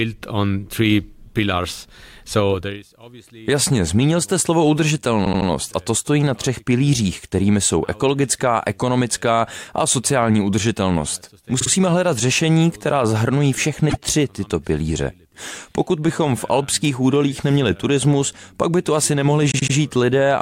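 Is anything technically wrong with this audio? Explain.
Yes. The speech stutters four times, at 5.24–5.47 s, 11.59–11.69 s, 13.89–13.96 s and 19.50–19.74 s. These are repeated frames: compressed frames were duplicated, so the decoder replays the same slice. The repeated blocks of about 78, 52 and 26 ms fit a 26 ms codec frame, and each event lengthens the audio by the replayed time, up to 0.24 s.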